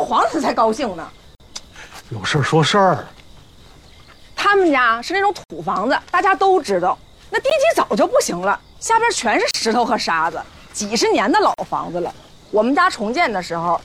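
At 1.35 to 1.40 s, 5.44 to 5.50 s, 7.50 s, 9.51 to 9.55 s and 11.54 to 11.58 s, the sound stops dead for 15 to 60 ms. This is a gap between stream segments: successive 2-second segments are stamped slightly apart, so the player fills the space with silence. Unlike a dropout, nothing is missing. The sound resumes exactly where it stopped, only later. The hard-edged holes also recur near the 2-second segment boundaries.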